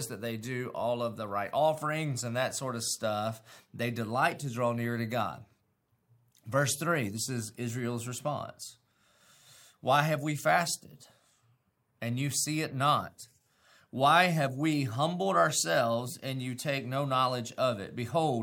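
No technical faults can be heard anywhere in this speech recording. Nothing in the signal chain draws attention to itself at any point.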